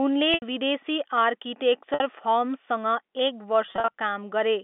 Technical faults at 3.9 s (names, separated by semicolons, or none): packet loss with pitch repetition